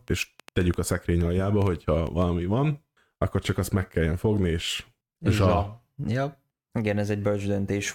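A train of clicks runs from 0.08 s to 2.23 s: about ten sharp, similar pulses at an uneven pace averaging 4.2 per second, each peaking about 5 dB above the speech. The repeated, near-identical shape points to an outside source injecting pulses into the signal path, likely electrical interference from nearby equipment or a faulty connection or power supply. It is heard as irregular ticking or popping laid over the speech, audible in the gaps between phrases too.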